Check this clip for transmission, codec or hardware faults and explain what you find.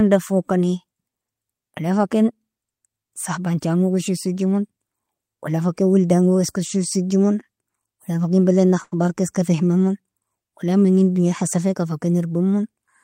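One fault shows up, a short stall from a late packet at 8.83 to 8.94 s. A packet arrived late and the jitter buffer ran dry, so the receiver stretched the last sound for about 85 ms, then resumed where it left off. Nothing is lost, but the speech hangs briefly with a slight buzz or dip.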